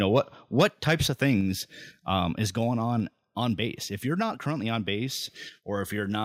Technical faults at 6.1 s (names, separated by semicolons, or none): none